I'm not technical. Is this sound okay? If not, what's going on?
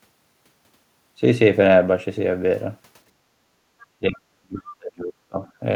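No. At about 3.8 s, a faint scrap of the other side's voice leaking through can be heard. It's likely echo that the call's echo cancelling missed. From 3.83 to 5.44 s, the talker's speech keeps dropping away, sometimes almost to silence, for about one and a half seconds. This is speech suppressed in double talk, likely caused by both sides talking at once.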